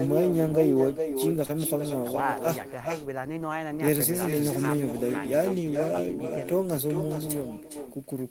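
From the start, the speech carries an echo with no canceller. The far end's loudspeaker leaks into its microphone and returns everything roughly 0.4 seconds later, about 6 dB down and thinner. Unlike room reverberation, it is a distinct delayed copy, not a smooth decaying tail.

At 1.45 to 1.51 s comes a short concealed packet loss. About 40 ms of audio never arrived, and roughly 31 ms of it was filled by extending the preceding sound before blending back. It is heard as a brief smear rather than the hard silence of a plain dropout.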